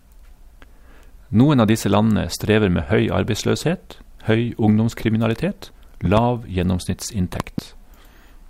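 Loud pops at 6.05 to 6.20 s and 7.40 to 7.60 s: each is a double pop, the second noticeably harder, roughly 15 dB over the speech against about 10 dB for the first, while the speech carries on underneath. A sudden voltage pulse from a plug, switch or static discharge is the likely cause.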